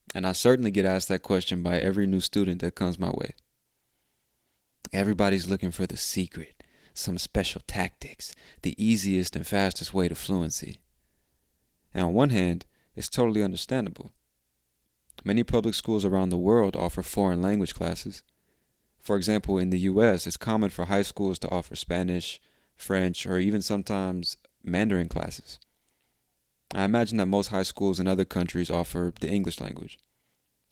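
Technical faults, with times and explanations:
No technical faults show up anywhere in this speech recording, so there's nothing to pin to a time.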